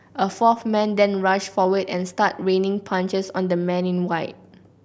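No dropouts, distortion, noise or timing faults can be heard anywhere in this speech recording.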